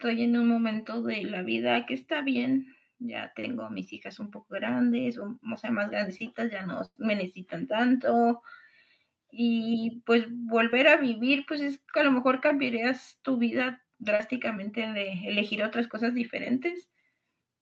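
At 6.85 to 6.97 s there is a burst of packet loss: a run of packets failed to arrive in time, leaving about 100 ms of the signal missing. The receiver stretched the last sound across the hole for roughly 105 ms, fading it so the held tone decays into around 50 ms of silence, and the speech then resumes further on with that stretch absent. Heard through the Opus call path, which keeps content up to about 8 kHz, the gap comes across as a frozen buzz or hiss dying away.

Short concealed packet loss follows at 10.71 to 10.73 s and again at 14.15 to 14.20 s. In each case a brief slice of audio, about 20 ms and then about 40 ms, never reached the decoder in time. The receiver patched the hole for about 16 ms and 39 ms by extending the preceding sound and blending back into the real signal. Each one sounds like a quick smear or wobble.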